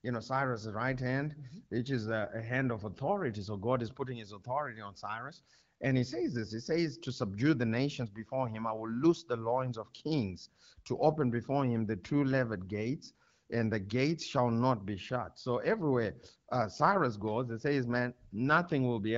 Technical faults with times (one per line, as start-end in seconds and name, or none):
none